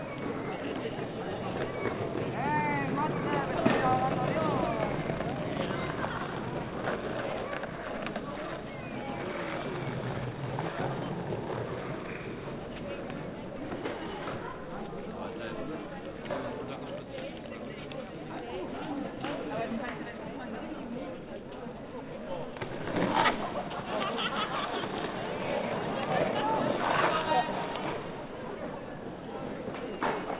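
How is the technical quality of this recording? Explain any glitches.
The recording carries its everyday sounds without any audible technical faults or glitches anywhere in the signal.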